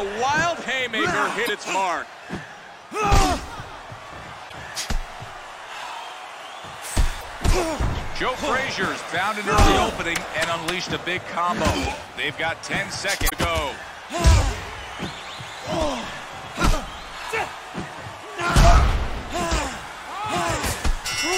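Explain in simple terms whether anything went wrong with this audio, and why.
Parts of the compressed audio data were damaged, which is called damaged data in a compressed stream. When the player reached those spots, it couldn't read the data properly, lost its place, and had to search for the next readable chunk before carrying on. You hear each one as a short chirp or blip lasting about 70 milliseconds, at 1.43–1.50, 4.46–4.53, 7.17–7.24 and 13.26–13.33 seconds.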